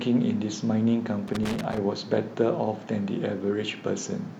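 From 1.28 s to 1.78 s the speech is broken up by loose connector crackle, an irregular burst of scratching that lasts about half a second. A worn or dirty contact in the signal path is shifting and repeatedly losing and regaining connection, so the audio is chopped on and off in rapid, uneven fragments. Any DC present on the line turns each make or break into a pop, which adds to the rough, gritty texture.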